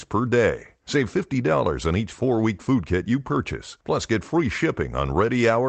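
Listening to the speech, which comes over a call connection, nothing stood out as a technical fault.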